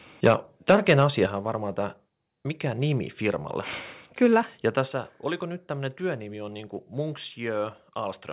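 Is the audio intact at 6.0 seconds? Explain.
Yes, at 6.0 seconds the speech is intact, carried through a call path whose narrowband sound, with nothing above 4 kHz, fits a 64 kbps G.711 mu-law telephone codec.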